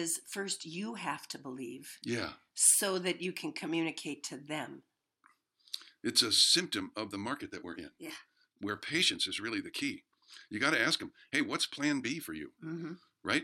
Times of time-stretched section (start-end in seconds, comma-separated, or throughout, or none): 6.51-13.43